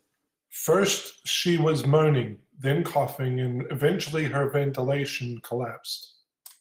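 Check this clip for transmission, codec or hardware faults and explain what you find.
No faults found: the speech carries the slight coarseness expected of Opus voice compression in hybrid mode, full bandwidth retained, consistent with a rate of around 20 kbps.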